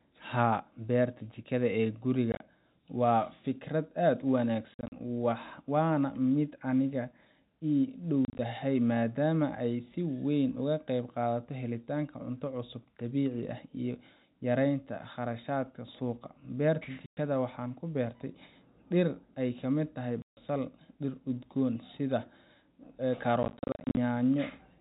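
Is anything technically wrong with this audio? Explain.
Yes, the speech has packet loss filled with silence at 2.32–2.40 s (after "beerta jikada ee"), 4.74–4.92 s (after "fikrad aad u"), 8.25–8.39 s (before "maadaama ay si weyn"), 17.06–17.17 s, 20.22–20.37 s and 23.43–23.97 s. Lost packets were replaced by silence, leaving hard-edged gaps in steps that fit 10 ms packets. The narrowband G.711 telephone sound is intact.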